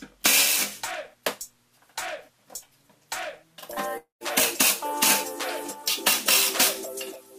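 From 3.97 to 4.24 s the audio breaks up in a way that points to a long network dropout, likely packets not arriving for roughly a quarter of a second. The last sound is stretched into a fading buzz over about 0.23 s, settles into silence for about 0.15 s, and then the audio resumes with about 0.24 s of content gone. Unlike a brief packet-loss click, the stream picks up further along, skipping material rather than continuing seamlessly.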